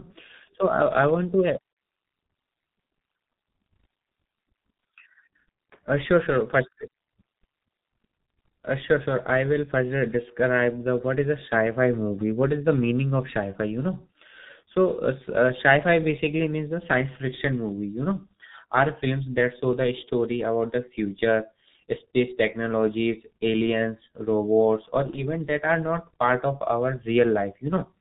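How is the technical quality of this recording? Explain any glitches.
Technical quality is poor. Heavy G.723.1 codec damage runs through the whole speech clip. The audio is muffled, with nothing above 4 kHz. It sounds hoarse, and consonants blur. The codec models speech coarsely in 30 ms frames, which fits its 6.3 kbit/s rate.

VoIP packet loss concealed by the speech codec occurs twice, at 1.73 to 1.76 s and 25.10 to 25.19 s. The second follows "technologies aliens robots or" and precedes "that are not part". Each gap fits one lost 30 ms frame. The decoder extends its last pitch and filter, giving a brief fading buzzy tone or coloured noise. The sound stays weak for a moment after.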